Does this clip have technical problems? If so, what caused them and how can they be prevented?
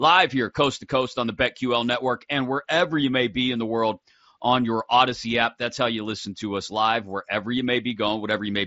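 No, the speech comes through the mSBC Bluetooth headset codec as that wideband link normally sounds, with content reaching up to about 7.7 kHz and nothing in the signal calling for a fix.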